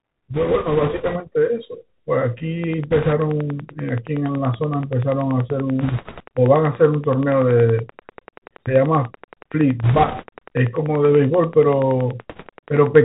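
The whole recording has passed through the Bluetooth CVSD headset codec, the narrowband one-bit delta scheme running at 64 kbps. A spectrogram shows a hard ceiling at 4 kHz with nothing above it, and a granular hiss filling the gaps between syllables. The s sounds come out scratchy, and loud, fast-rising passages smear where the adaptive step cannot keep up. The damage is plainly audible throughout.

The first burst of bit errors on the Bluetooth voice link runs from 0.34 to 1.18 s. At an error rate of around 5 percent, flipped bits nudge the delta stream off course. Each error carries little weight and decays quickly, so the result is a rushing, crackly wash rather than loud clicks. On a spectrogram it shows as a diffuse rise in broadband noise below 4 kHz. In the waveform the envelope looks thicker and fuzzier. The same wash returns at similar strength from 2.91 to 3.13 s, 5.81 to 6.24 s, 9.83 to 10.25 s and 12.30 to 12.48 s.

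From 2.64 s to 12.96 s a train of clicks runs under everything. It ticks at a steady 10.5 per second, around a hundred pulses in all, peaking about 5 dB above the signal, and it is heard in the pauses as well. The evenly spaced, near-identical pulses show as thin vertical lines across the spectrogram and sharp spikes on the waveform. Their regularity points to a likely cause in electrical interference from nearby equipment.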